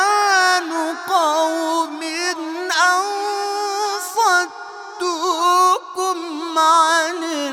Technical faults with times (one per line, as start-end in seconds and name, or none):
none